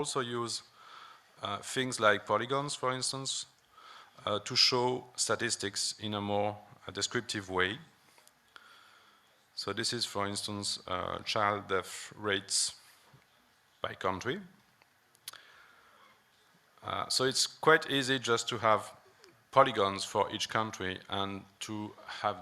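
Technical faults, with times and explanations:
No technical faults can be heard anywhere in the audio. Nothing in it interrupts, distorts or drops away at any point.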